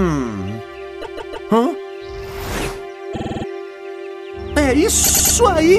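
At 1.01 s the sound stutters: a block of about 157 ms plays three extra times, running to 1.48 s, a classic case of repeated frames. The same compressed chunk got decoded again and again. It happens twice more: a 52 ms block loops six extra times from 3.12 to 3.44 s, and a 105 ms block repeats three extra times from 5.03 to 5.34 s.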